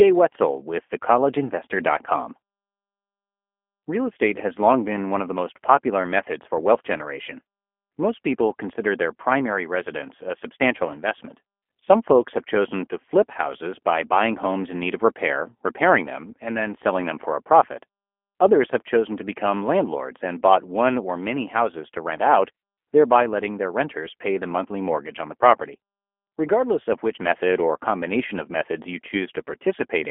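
It's a speech recording, and the whole thing has been through the G.729 codec, in a way that points to an 8 kbit/s VoIP leg. The line band runs roughly 250 Hz to 3.4 kHz, with nothing at all above 3.5 kHz, so it sounds thin and boxy. The coding damage is plainly audible: the codec rebuilds each frame from a vocal-tract model, a pitch predictor and a few pulses, which leaves the speech rough and slightly synthetic throughout.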